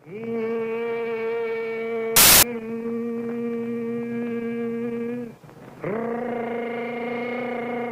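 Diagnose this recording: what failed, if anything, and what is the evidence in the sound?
Samples built from the wrong bytes, from 2.16 s to 2.43 s: for about a quarter of a second the sound is replaced by a burst of loud, harsh broadband noise. The failure sits at the sample-format conversion stage. The reader assembled each sample's bytes wrongly, whether shifted by a byte, in swapped order or at the wrong alignment. That pushed the rapidly changing low-order bits into the most significant positions, so every value became essentially random at high level.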